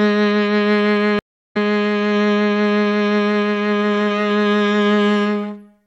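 At 1.19 s the music drops out completely for about 295 ms, then comes back at 1.57 s with a soft fade-in, picking up roughly a third of a second further along than where it stopped, so a short piece of the music is skipped. This is a stream reconnect: the connection failed, the player fell silent, re-established the link and started a new decoder partway through the live stream, joining at a later point.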